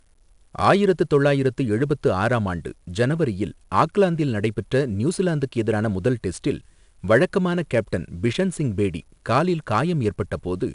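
From start to finish the speech carries 4-bit ADPCM compression. Each sample is coded as a coarse step from a prediction, so grainy hiss rides on the louder sounds. Nothing reaches above 10.6 kHz, dulling the top. The sound fits an 88 kbps stream.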